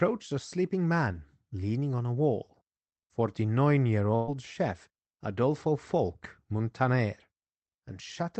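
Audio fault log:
4.15–4.31 s: burst of packet loss. The speech stalls into a stretched, fading copy of the preceding sound for about 120 ms, then picks up further along with that stretch gone. Consecutive packets arrived too late or never, and the receiver filled the gap by extending the last audio.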